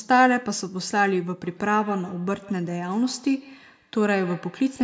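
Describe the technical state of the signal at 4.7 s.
Feedback echo between two devices is present at 4.7 s, within a span running from 1.44 s to the end. A second device replays the speech into a nearby microphone, so each sound returns roughly every 150 ms, at least about 21 dB below the speech, thinner and ringing.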